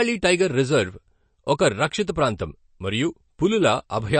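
Throughout the speech, nothing sounds above 8.3 kHz, and the sound turns watery and swirly as weak frequency lines flicker on and off, likely from MP3 compression at a low bitrate near 36 kbps. A spectrogram shows a flat ceiling at 8.3 kHz and patchy, blinking holes below it.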